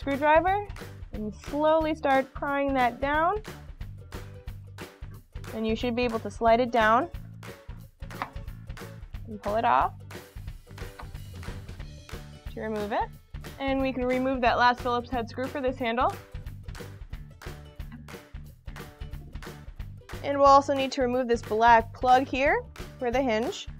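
No technical faults are audible anywhere in the recording.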